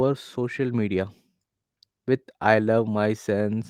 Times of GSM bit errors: none

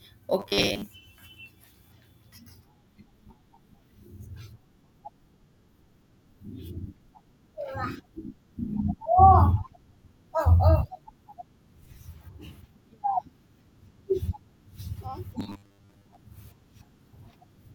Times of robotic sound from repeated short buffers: 0.40-0.87, 15.40-16.17

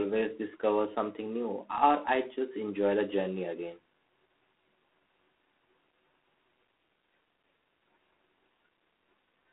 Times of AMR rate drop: none

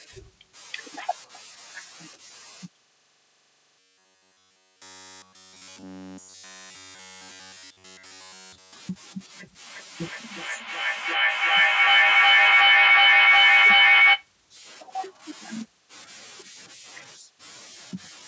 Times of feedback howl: 9.62-14.35

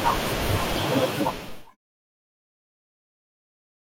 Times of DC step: 1.49-3.67

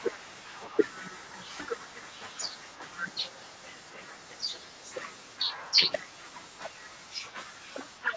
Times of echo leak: 0.00-4.89, 5.17-8.03

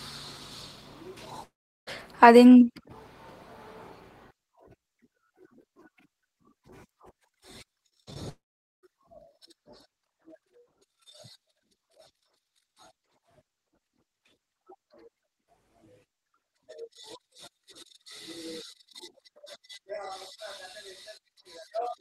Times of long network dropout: 1.43-1.89, 8.29-8.85

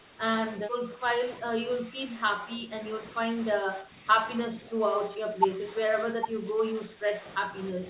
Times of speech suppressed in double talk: 0.00-0.21, 0.57-2.74, 3.55-4.08, 4.47-7.89

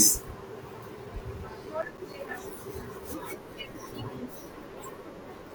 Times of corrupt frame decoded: none

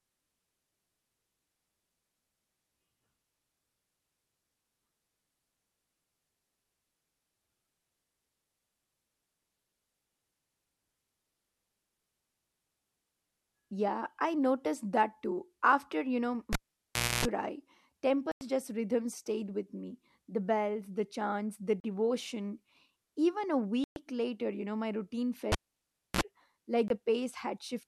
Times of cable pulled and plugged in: 16.53-17.25, 25.52-26.21

